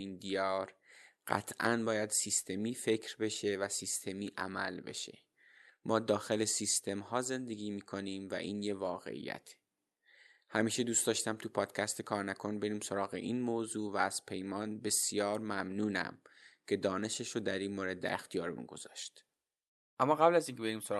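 No faults found in the speech; the audio shows the ordinary coding texture of a call codec and tops out near 12 kHz, which fits a WebRTC path running Opus at a moderate bitrate.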